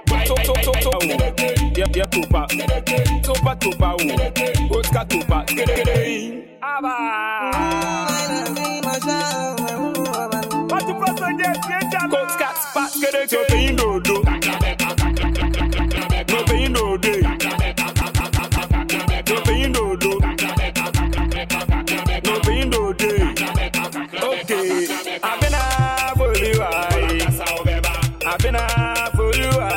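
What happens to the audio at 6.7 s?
Nothing goes wrong at 6.7 s; the audio runs through that moment intact, with no dropout, click, glitch or other fault.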